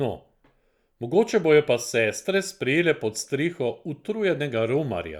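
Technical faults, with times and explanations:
No technical faults, with times and explanations, are present.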